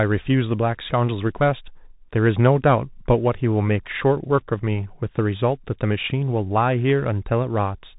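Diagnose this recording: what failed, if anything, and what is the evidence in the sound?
Bluetooth CVSD headset codec, throughout the speech from start to finish, at the codec stage. The band stops at 3.8 kHz, the narrowband ceiling of a headset link, and the coding damage is plainly audible: s sounds come out scratchy, a granular hiss sits under the speech, and loud high-frequency passages distort. CVSD sends one bit per sample, saying only up or down, with an adaptive step size. Fast, loud changes outrun that step and break up. The texture fits a 64 kbit/s stream.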